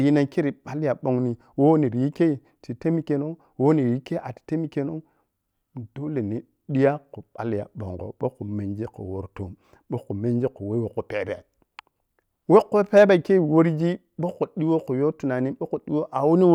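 No technical faults can be heard anywhere in the recording; the signal stays steady and intact throughout.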